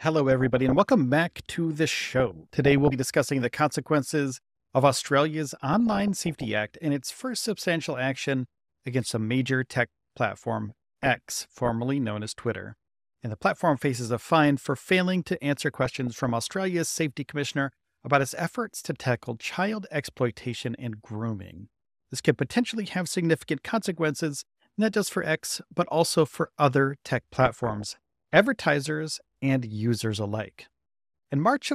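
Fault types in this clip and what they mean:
DAB burbling: weak reception lets bit errors through into the MP2 data, making sub-bands jump in level, so six short bursts of noisy blips sit over the speech.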